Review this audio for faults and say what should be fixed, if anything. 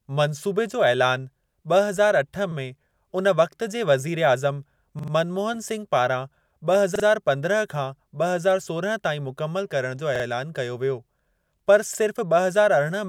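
Repeated buffer at 2.52, 4.99, 6.96, 10.16 and 11.95 s: the speech stutters as a 43 ms slice, which fits a 2048-sample buffer, plays again one to three extra times with a hard join. Fresh audio reached the device late, so it replayed the last block, and nothing was skipped. To prevent it, enlarge the output buffer or give the audio thread higher priority so new data always arrives before the device needs it.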